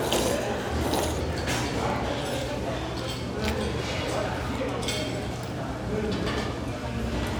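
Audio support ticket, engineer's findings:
No faults found on listening; no dropouts, clicks, distortion or level problems audible. Sound content, nothing to action on the playback or capture side.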